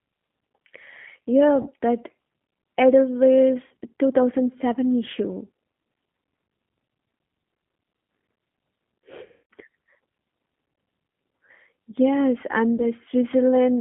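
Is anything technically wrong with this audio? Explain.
Yes. The whole clip runs through the G.729 codec at a bitrate consistent with G.729A's 8 kbit/s, inside a telephone band of about 150 Hz to 3.5 kHz. The coder rebuilds each 10 ms of speech from a vocal-tract filter, a pitch predictor and a handful of pulses. That gives the voice a plainly audible rough, slightly synthetic grain. This graininess separates it from simple band-limiting, which would only sound muffled and would stay smooth.

There is VoIP packet loss concealed by the speech codec at 1.62–1.69 s, 3.67–3.72 s, 9.26–9.51 s and 12.77–12.85 s. Roughly 40, 40, 240 and 20 ms of audio went missing. Each time, the decoder kept extending its last pitch and filter at falling gain. Instead of a silent hole or a click, you hear the sound stretched into a buzzy tone or coloured noise that fades, and the voice stays weak briefly afterwards.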